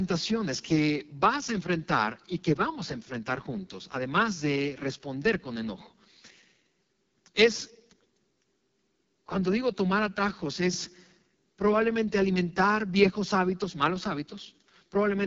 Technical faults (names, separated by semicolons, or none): AMR wideband (HD Voice) codec